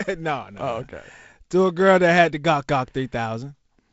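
No technical faults can be heard in the speech, which carries the light coding texture of G.722 wideband telephone coding, with nothing above 7.7 kHz and a slightly grainy lower band that fits its 48 kbit/s mode.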